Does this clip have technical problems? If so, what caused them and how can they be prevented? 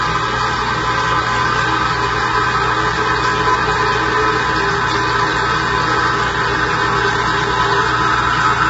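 Yes. Throughout the clip the sound is rough and grainy, with heavy damage and nothing above 7.8 kHz, which points to likely low-delay AAC compression (AAC-ELD) at a low rate around 16 kbps. Short frames resolve tonal detail poorly, leaving noise between components. Prevent it by encoding at a higher bitrate or using a longer-frame codec when low latency isn't required.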